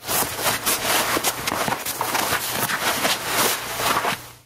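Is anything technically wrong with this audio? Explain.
Yes, there's gain pumping all the way through. The gain swings by something like 15 dB, leaving everything squashed. Likely cause: input gain set far too high, with a fast limiter clamping down on every peak.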